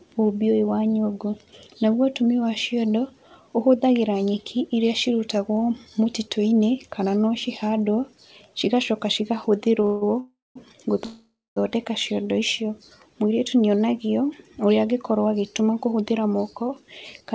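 Between 9.85 and 11.58 s there are three call audio freezes, at 9.85 to 10.03, 10.19 to 10.57 and 11.05 to 11.58 s. Each is likely a jitter buffer running dry while packets were held up. The last sound is stretched into a fading buzz, and the longer two decay into about 0.2 s of silence. Unlike a dropout, the audio then resumes exactly where it stopped, later but complete.

From 15.40 to 17.34 s a jitter buffer speed-up trims short pitch-period slices to shed around 150 ms of backlog. The sound runs at 106% and feels hurried, but its pitch stays put, which separates it from a resampling error. Through the G.722 call path nothing is heard above 8 kHz.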